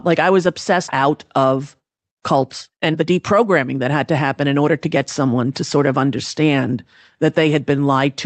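Speech clip with a skip ahead at 0.87 s, right after "I was": roughly a second of audio is missing, and the two sides of the gap are butted together with no fill, so the phrase jumps abruptly forward. That stretch of audio was dropped while later audio was already queued. From 0.97 s to 5.78 s a jitter buffer speed-up follows. Playback runs at about 108% with the pitch unchanged, so the speech sounds hurried. Over that stretch about 0.4 s is trimmed away in many small pitch-period cuts, as the receiver works its buffer back down toward its target depth.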